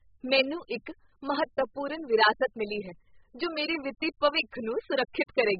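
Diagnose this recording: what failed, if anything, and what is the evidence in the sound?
The speech sounds dull and smeared from start to finish, with nothing above 5 kHz, a watery warble on sustained vowels and a fizzy, gritty edge on sibilants. This heavy damage points to the codec stage, most likely AAC compression (AAC-LC) at a very low bitrate, around 8 kbps. Starved of bits, the encoder drops the top band entirely and coarsely quantises what remains, leaving spectral holes and substitute noise that shift from frame to frame.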